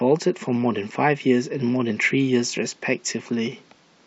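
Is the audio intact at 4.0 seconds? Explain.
Yes, at 4.0 seconds the speech runs on intact, with no dropout, click, distortion or other fault to be heard at that moment.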